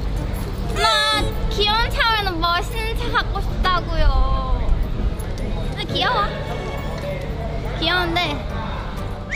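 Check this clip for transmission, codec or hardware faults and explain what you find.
Nothing in here jumps out as a transmission, codec or hardware problem; it all sounds steady and intact to my ear.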